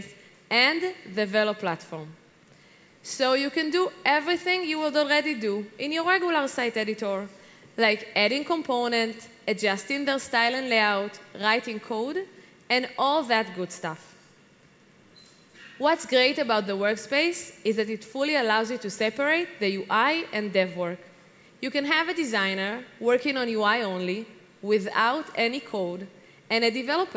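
No technical faults can be heard anywhere in the clip.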